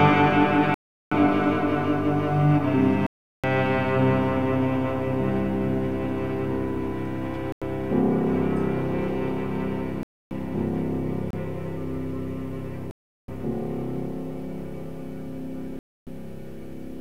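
The sound drops out seven times in blocks of digital silence: 0.74–1.12 s, 3.07–3.44 s, 7.52–7.62 s, 10.03–10.31 s, 11.31–11.33 s, 12.91–13.28 s and 15.79–16.07 s. The longest gaps last about 0.37 s, which fits blocks of 16384 samples at 44.1 kHz, and the shortest about 26 ms. These most likely come from unfilled output buffers. Each cut is abrupt, and the longer ones are heard as distinct holes.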